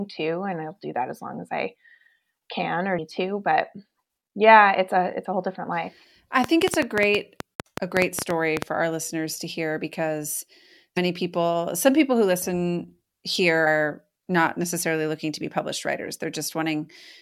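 At 2.97 s, damaged data in a compressed stream makes the decoder lose frame sync, giving a brief glitch. On a spectrogram it shows as a thin broadband smear, with a small step in the waveform.

From 6.44 to 8.63 s, a train of clicks of about twenty sharp pops arrives irregularly at roughly 7.8 per second, peaking about 20 dB above the sound. The likely cause is interference or a faulty connection. The pops appear as repeated vertical spikes.

The same corrupted-stream blip returns at 10.96 s and 13.66 s.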